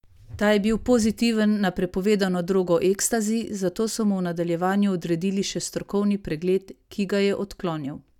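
No technical faults can be heard anywhere in this speech recording; the signal stays continuous and steady at every point.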